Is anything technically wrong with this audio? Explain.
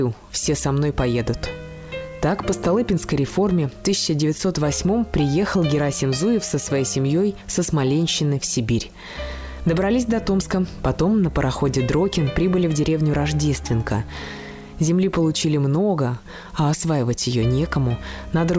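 No, nothing's wrong here: it's simply audio that came over a call, and the way the top end stops at about 8 kHz fits the wideband G.722 codec at 64 kbps such calls commonly use.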